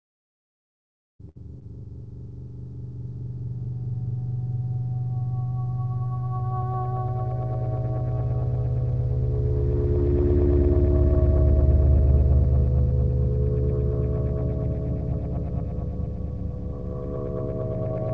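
At 1.29 to 1.37 s there is a burst of packet loss. Roughly 60 ms of audio never arrived in time, and the receiver covered a 62 ms hole by extending the last sound it had and letting it fade. Depending on what came before, that extension is either a held tonal buzz or a decaying hiss. When real audio returns, it picks up further on, with that stretch gone. On a spectrogram, the preceding spectral pattern repeats in a smooth, frozen block that weakens toward its end, then cuts abruptly to different content. The waveform shows a shrinking, overly regular envelope followed by a discontinuity.

At 1.59 to 1.63 s comes a short concealed packet loss. About 20 ms of the call missed the decoder, and an 18 ms patch was synthesised from the preceding sound, either pitch-based or as shaped noise, then crossfaded back into the real signal. It is heard as a quick smear or wobble, and a brief transient there can drop out entirely. 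A spectrogram shows a thin, blurred column where fine detail briefly smooths over. The waveform has a short, too-uniform segment that blends back in rather than jumping. Throughout the clip, the call path's G.722 codec at 64 kbps leaves nothing above 8 kHz, visible as an empty band across the top of the spectrogram.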